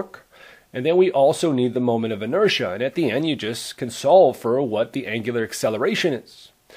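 No technical faults are audible.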